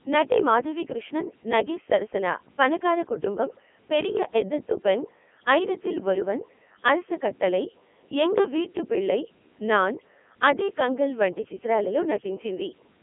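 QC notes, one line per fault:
Throughout: Codec 2 vocoder, speech turns robotic and buzzy, rebuilt from sine waves off pitch and envelope at what sounds like 3.2 kbit/s, band-limited 200 Hz to 3.4 kHz.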